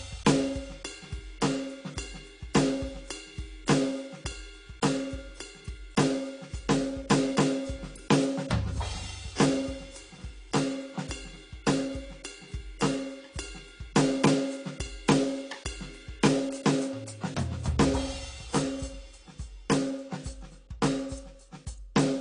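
A music clip with AAC compression damage throughout. Nothing comes through above about 10.2 kHz, so it sounds dull and smeared, with that warbly, fizzy texture on held sounds. The likely cause is low-bitrate AAC-LC, probably around 32 kbps.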